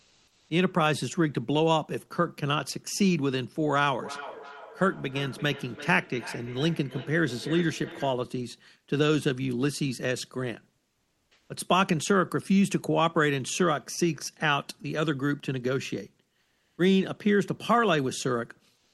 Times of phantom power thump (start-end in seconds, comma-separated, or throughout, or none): none